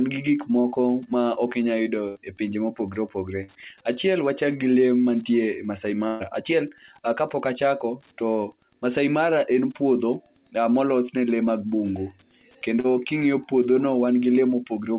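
Under the whole recording runs Wi-Fi interference: a nearby radio's beacon, every 102.4 ms, is rectified into a faint ticking about ten times a second, roughly 40 dB below the speech. On a spectrogram it shows as evenly spaced thin vertical lines across the band, and as a regular comb of small spikes on the waveform.

From 0.60 to 0.67 s, just after "gi gik", there is a short concealed packet loss. About 40 ms never arrived, and the receiver extended the preceding sound before blending back, giving a brief smear. The same happens at 12.80 to 12.87 s. Both appear as a short stretch of smoothed, repeated texture in the spectrogram, with no gap in the waveform.

Three bursts of packet loss follow. From 2.08 to 2.18 s, just before "e pinje ma opogore", about 80 ms is gone, and 74 ms of continued, fading sound replaces it. From 3.43 to 3.57 s, right after that phrase, about 40 ms is lost and patched. 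The longest, from 6.07 to 6.23 s, loses about 120 ms and is filled with 125 ms of concealment. Each is heard as a held buzz or hiss dying away before the speech resumes further on. On a spectrogram each shows as frozen, decaying harmonics or noise, and on the waveform as a tapering envelope.

The call path is G.711 A-law, which fits a 64 kbps stream. Nothing appears above 4 kHz, so the spectrogram is empty above that line.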